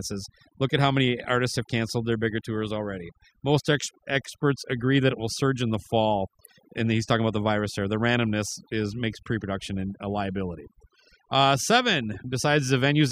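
From start to finish the speech has been run through overdone noise removal. The denoiser was pushed so hard that any frequency band sitting near its idea of the noise floor gets pulled way down or cut outright, and the softer bits of the voice get caught in that too. So the gaps go almost dead quiet with little twinkling specks.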